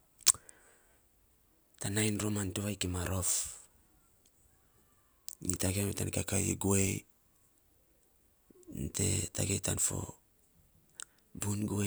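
After "rom ya tan", 6.18 to 7.29 s slows by 5.65% and drops about a semitone, likely a drift correction step. On a spectrogram, the harmonics step down, then snap back.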